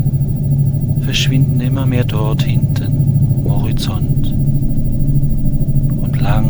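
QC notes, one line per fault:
3.45–3.48 s, stream segment skipped: the sound jumps abruptly ahead with a short blip, likely because one stream segment failed to load and playback resumed at the next. The waveform shows a hard discontinuity; the spectrogram shows a thin vertical broadband stripe.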